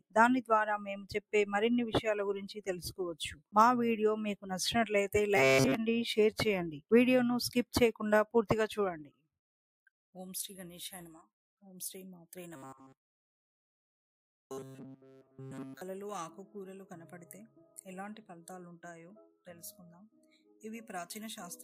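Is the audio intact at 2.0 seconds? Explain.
No. From 1.85 to 2.0 s the sound sinks by about 10 dB. This is sound cut by the noise suppressor: it judged this material to be noise and pulled it down harder than the rest.

That dip sits inside a wider problem: a noise suppressor applied to music or sounds, left running across the whole clip. Held tones and decays keep being turned down while attacks pass through, giving a pumping, fluttering level swing of roughly 10 dB.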